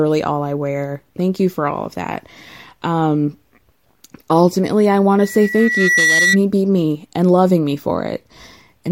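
A 2 kHz tone swells into a squeal from 5.18 to 6.39 s, after "ultimately I want": loudspeaker feedback squeal, the microphone re-amplifying its own loudspeaker.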